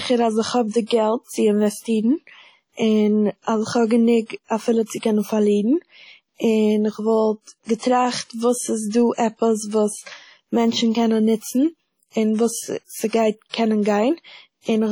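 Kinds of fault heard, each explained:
WMA compression: heavy washy ringing and hiss breathing with the speech, likely from a low bitrate near 32 kbps; unlike band-limited codecs, highs still reach 20.1 kHz.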